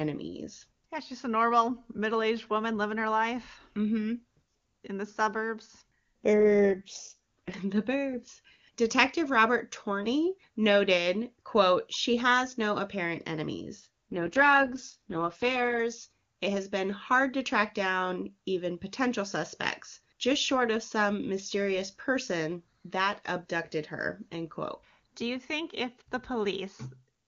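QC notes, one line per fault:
6.35–7.55 s and 13.79–15.80 s, AMR rate drop: the link forced the codec down, consistent with a fall from 23.85 to 6.6 kbit/s. Speech turns rough and synthetic with no gap or band loss, then recovers.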